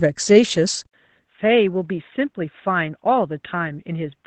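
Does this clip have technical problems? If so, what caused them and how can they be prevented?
Yes. Opus voice compression runs through the whole clip. The speech sounds muffled and slightly hoarse, with a faint robotic edge. Nothing is present above 8.7 kHz, which fits Opus in wideband SILK mode. SILK models speech with linear prediction and codes the excitation coarsely at low rates. The damage here is plainly audible and fits a bitrate around 12 kbps. To prevent it, give the encoder a higher bitrate, such as 24 kbps or more.

At 0.85 s there is an 80 ms silence. After it, the sound changes and stays changed to the end. Everything above 3.8 kHz disappears, so the speech turns dull and boxy. The level drops by about 10 dB. A new, very faint noise floor appears far below the speech. This is likely an input switched to a poorer device, such as a headset falling back to its narrowband call profile. 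To prevent it, lock the input device before recording and disable automatic device switching.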